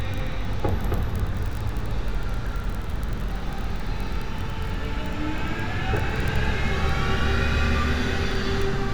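At 5.47 s and again at 6.68 s, a single sharp click cuts through the audio. Each is likely dropped samples: a handful of samples, well under a millisecond, went missing. The waveform jumps to a later value, so the step clicks without removing any sound.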